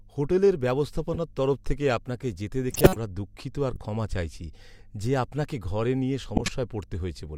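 Corrupt frames were decoded at 1.14–1.17, 2.71–2.96 (after "তরফ থেকে আপনাকে যেতে"), 3.74–3.79 and 6.36–6.49 s. Damaged compressed data was played anyway, which misplaced energy into chirps and noise bursts. The loudest burst comes around 2.7 s.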